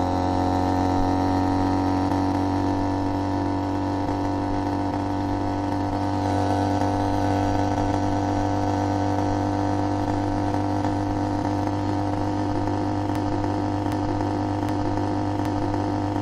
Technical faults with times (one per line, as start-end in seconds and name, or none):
13.15-16.21 broken-record loop